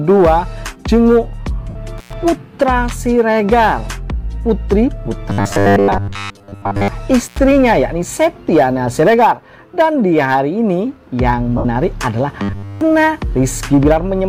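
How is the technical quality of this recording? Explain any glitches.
The recording has three kinds of glitch, each heard twice.

Lost LE Audio frames occur at 1.69 to 1.76 s and at 11.58 to 11.65 s. The gaps last 60 ms and 67.5 ms. That fits about eight and nine lost frames. The LC3 decoder fills each gap by replaying the last spectrum with random signs. After the first few frames it fades that copy down. Any tones turn into a noisy smear, then thin out.

Intermittent contact breaks the line at 1.98 to 2.13 s and at 7.25 to 7.39 s. The line stays open for about 100 ms and about 83 ms. A loose cable or plug briefly loses its connection. The sound drops out or breaks up. Crackle marks the edges of each break, where the contact opens and closes. Hiss fills the open stretch.

Robotic sound from repeated short buffers covers 5.30 to 6.88 s and 12.42 to 12.81 s. In the first stretch about 70 percent of the audio is repeats. 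In the second all of it is. The likely cause is new audio arriving too seldom, so the last short chunk is replayed while real audio is skipped. A fixed 100 Hz buzz results, which fits a 10 ms buffer. The sound becomes rigid and metallic, tracking the original only roughly.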